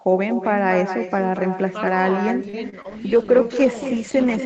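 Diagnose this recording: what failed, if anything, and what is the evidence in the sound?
Echo with no canceller, at the far end's call processing: throughout, each phrase returns about a fifth of a second later, about 9 dB quieter and thinner. The far loudspeaker feeds its microphone unremoved. A fixed network-length delay distinguishes it from room reverberation.

Short stall from a late packet, in the network and jitter buffer: from 2.49 to 2.55 s a sound is held about 40 ms too long with a faint buzz or dip, then resumes where it left off. Nothing is skipped. That sets it apart from packet loss.

Short concealed packet loss, in the network with decoder concealment: at 2.69 to 2.74 s and 2.82 to 2.86 s there are brief smears. About 20 ms of real audio is gone each time, replaced by extrapolated sound that blends back. Unlike the stall, content is actually missing.

Call bitrate drop, at the codec, driven by network bandwidth estimation: from 2.86 s to the end the sound turns rough and watery as Opus falls from 32 to 10 kbps and stays there. 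It persists rather than being momentary, which separates it from the loss events.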